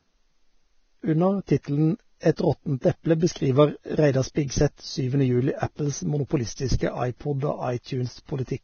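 Throughout the speech there is heavy codec damage, likely from Vorbis compression at a low rate that points to about 18 kbps. Nothing remains above 6.6 kHz, and coarse quantisation turns the remaining treble detail into grainy hiss, roughening tones and blurring attacks.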